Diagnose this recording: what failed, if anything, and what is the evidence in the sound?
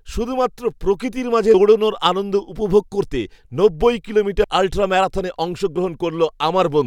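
The speech skips abruptly at 1.54 s and 4.44 s, each time losing about a tenth of a second, with no gap of silence at the join. The failure is likely audio missing between chunks at the buffer stage, with segments written every 3 s.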